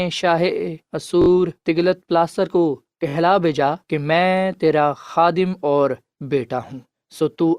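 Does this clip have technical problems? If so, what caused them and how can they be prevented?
Yes. A repeated buffer is heard from 1.22 to 1.28 s. About 21 ms of speech plays again three extra times, each repeat butting hard against the last. This produces a short, rapid stutter. The repeat length fits a 1024-sample buffer. Fresh audio didn't reach the output in time, so the device replayed what it already held. Little or no audio seems lost. The playback simply stalls and then resumes. Larger buffers or higher priority for the audio thread would prevent this.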